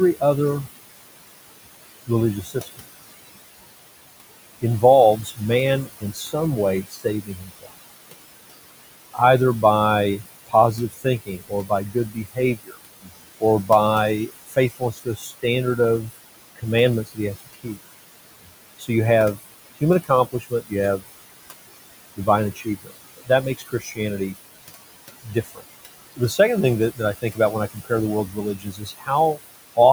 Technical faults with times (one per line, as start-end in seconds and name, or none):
0.00-29.93 noise suppressor artifacts
2.07-2.81 speech cut by the noise suppressor
4.62-7.72 speech cut by the noise suppressor
9.14-21.03 speech cut by the noise suppressor
22.16-29.78 speech cut by the noise suppressor